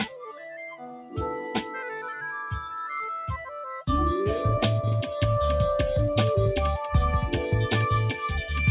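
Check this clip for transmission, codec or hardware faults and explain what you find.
The fault is processing, not transmission. A speech-oriented noise suppressor is acting on non-speech sound, and it audibly clamps two passages. The band stops at 4 kHz, which fits a G.711 A-law call path at 64 kbps.

Noise suppressor applied to music or sounds, throughout: the suppressor treats sustained content as noise and pulls it down, so level swings by around 10 dB as tones and tails are ducked while onsets pass. Unlike packet loss, nothing drops out abruptly. The sound pumps and thins.

Sound cut by the noise suppressor, 0.06 to 1.17 s and 1.38 to 1.79 s: here the gain reduction bites hardest, about 13 dB in the first stretch and about 5 dB in the second. Steady and decaying parts sink or get truncated while sudden transients mostly come through. That sets it apart from a codec or bandwidth fault, which would affect everything alike.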